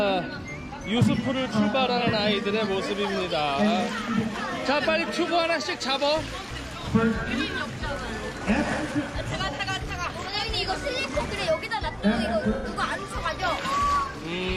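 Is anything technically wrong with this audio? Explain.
Yes. AAC frame loss with concealment occurs at 1.97, 7.26, 9.53 and 12.55 s. The decoder patches each gap from the last good spectrum. Brief smeared, phasey patches result. The first three last about 43 ms, fitting one lost frame. The last runs about 85 ms, which suggests two.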